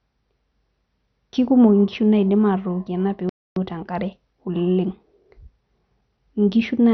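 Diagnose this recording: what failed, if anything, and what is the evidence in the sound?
Codec stage, likely MP2 compression starved of bits: upper sub-bands are switched off, leaving dull speech with nothing above 6.1 kHz and granular gurgling throughout.

The playback buffer likely ran dry in a playback stall. The speech cuts to silence from 3.29 to 3.56 s, a gap of about 0.27 s, before resuming.

Time-compressed catch-up at playback drains the backlog by splicing out small pieces. From 3.56 to 6.26 s the speech runs 1.1 times fast, at normal pitch.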